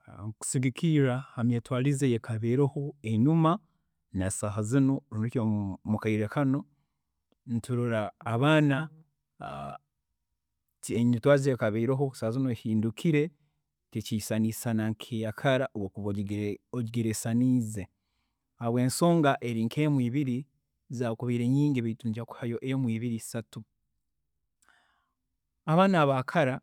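No technical faults are audible anywhere in the speech recording.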